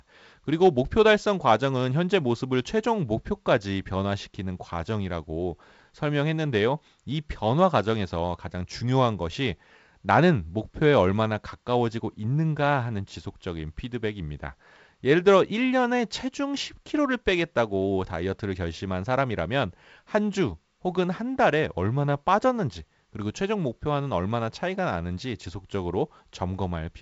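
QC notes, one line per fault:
No faults to note: the speech comes through G.722 wideband telephone coding at a setting that points to 56 kbit/s, with nothing above about 7.7 kHz.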